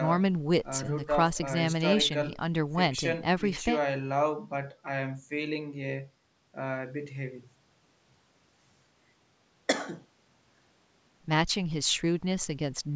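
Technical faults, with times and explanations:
No technical faults detected.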